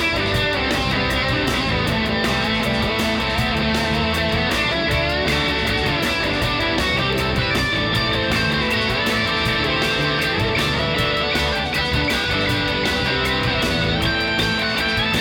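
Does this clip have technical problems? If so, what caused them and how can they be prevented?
Yes. Periodic USB or driver dropouts: something stalls the audio path every 1.02 s from 6.11 to 14.28 s, skipping about half a millisecond each time and leaving regular ticks. Prevent this by finding and disabling the background task, or by using a larger audio buffer.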